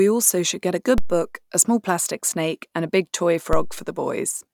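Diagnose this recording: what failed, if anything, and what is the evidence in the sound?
The speech has two DC steps, at 0.98 s and 3.53 s, each heard as a low thump under the speech, which continues unchanged. The fault sits at the converter or analogue input stage: the waveform's zero line jumps by about -10 dBFS and then drifts back as a high-pass near 2 Hz drains it. On the waveform, the baseline jumps and then curves back toward zero; on a spectrogram, each step shows as a brief broadband vertical stripe concentrated in the lowest frequencies.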